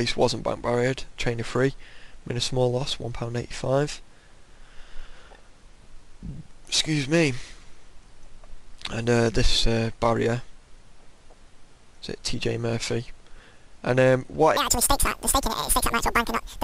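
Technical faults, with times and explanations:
14.57 to 16.63 s, wrong sample rate: the final stretch of sound runs at twice normal speed and sits a full octave, 12 semitones, higher, which fits audio made at 24 kHz being played back at 48 kHz with no conversion. What separates this from a pitch shift or a time-stretch is that speed and pitch move together by exactly the same factor of 2, with no processing artefacts.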